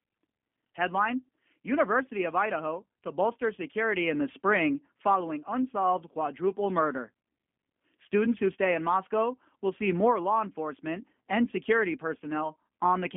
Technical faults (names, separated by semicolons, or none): G.729 codec